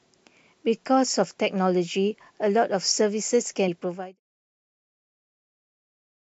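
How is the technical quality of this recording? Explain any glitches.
One glitch stands out. At 3.67 s, compressed frames are skipped: a handful of damaged or missing frames drop about a tenth of a second of speech, so the audio jumps ahead at that point. The fade-out from 4.2 s is smooth.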